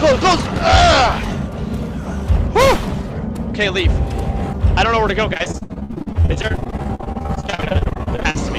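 From 5.33 s to 8.36 s there's repeated packet loss, giving that robotic sound: dozens of short holes, none longer than 62 ms, each papered over by stretching the previous sound. About two-fifths of that stretch is patched, so it turns choppy.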